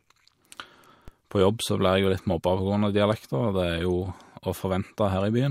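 Speech, with a single DC step at 1.08 s. The waveform's zero line jumps abruptly by about -30 dBFS, heard as a brief low thump. A 20 Hz high-pass then pulls the offset back toward zero. The speech carries on unchanged through it.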